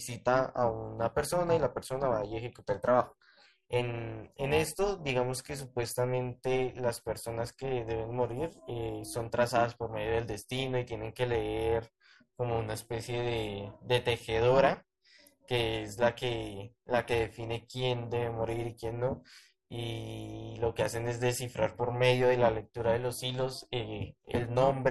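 Throughout, overlap-add ripple pumps the speech level by about 11 dB roughly 400 times a second, because the windowed frames were rejoined with overlaps whose gains don't sum flat. Unlike a separate buzz or hum, it modulates the speech itself, heard as a metallic buzz with extra tones around the voice.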